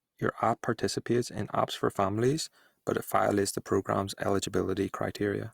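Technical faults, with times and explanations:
2.15 s to the end, pre-emphasis left on: from about 2.15 s the speech goes thin and bright, with sibilants getting edgy and hissy. The shape of the lift matches the CD 50/15 µs pre-emphasis curve, which boosts treble before storage and expects the player to cut it back. That cut never happened, so the top end stays raised, about 8 dB at 10 kHz relative to 1 kHz, and the voice loses its body next to the highs.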